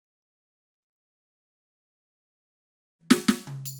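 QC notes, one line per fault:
0.97–3.05 s, long network dropout: the music cuts out, a brief fading remnant of the last sound gives way to about 2 s of silence, and playback resumes with that passage simply gone. This likely comes from packets failing to arrive, with concealment fading out.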